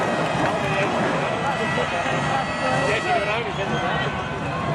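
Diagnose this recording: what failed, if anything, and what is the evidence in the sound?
The failure sits at the network jitter buffer: clock drift between sender and receiver. The sending clock runs fast, by something like 4 percent, so audio arrives quicker than the receiver plays it out. The buffer keeps overfilling, and the receiver trims short pieces to stay in step. The evidence is small timing hiccups, brief skips where a sliver of sound goes missing, recurring at irregular intervals throughout the clip rather than at any single point.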